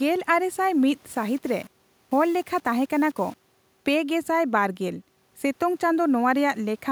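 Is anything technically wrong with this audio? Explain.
Yes. Low bit depth without dither occurs from 1.09 to 3.57 s. The speech was likely rounded to very few levels, consistent with about 7 bits, with no dither. The error follows the signal, giving grainy distortion about 30 dB below it that roughens quieter syllables.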